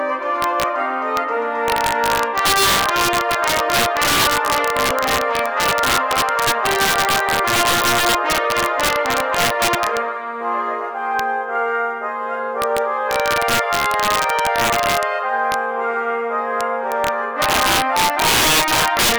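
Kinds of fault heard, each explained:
Integer overflow: throughout the clip, the signal is pushed about 8 dB past the largest value the integer format can hold, and instead of clamping, those peaks wrap around to the opposite sign. Only a small fraction of samples exceed the limit, but each one produces a violent crack on loud passages.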